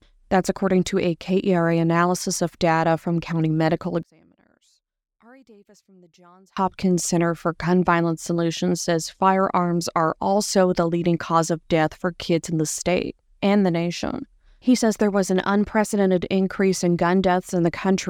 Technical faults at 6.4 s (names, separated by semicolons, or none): one channel inverted